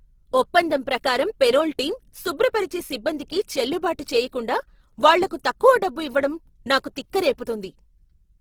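From start to finish the speech sounds grainy and rough, with a noisy texture laid over the tonal parts of the voice instead of clean harmonics, yet the top end stays open, reaching up to about 20.2 kHz. The damage is plainly audible and is likely Opus compression in its music mode at a low rate, around 16 kbps. Short of bits, the encoder keeps each band's energy but refills the detail with folded or noise content.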